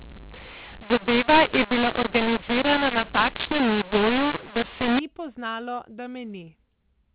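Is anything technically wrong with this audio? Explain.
Yes. From 0 to 4.99 s, ending just before "poznalo da", there is a mu-law and A-law mix-up. A-law samples are decoded as mu-law, so levels scramble and the speech turns harsh. Pauses fill with noise, and the waveform never settles to flat silence. The G.711 telephone band still cuts off at 4 kHz.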